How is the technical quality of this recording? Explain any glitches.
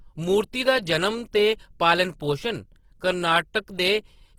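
The technical quality is compromised. Throughout, the speech sounds grainy and rough, with a noisy texture on sustained sounds, likely from Opus compression at a low bitrate around 16 kbps, which fills starved bands with folded or noise content.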